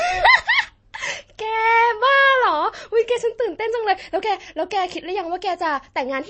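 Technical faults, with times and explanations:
Throughout, MP3 compression: the speech has nothing above 8.4 kHz and a watery, swirling texture, likely from MP3 encoding at a low rate, which fits about 32 kbps. Short of bits, the encoder cuts the treble at a fixed point and drops weak frequency lines that flicker on and off between frames. That flicker, with metallic chirps on s sounds and smeared consonant attacks, sets it apart from a simple low-pass filter, which only dulls the sound.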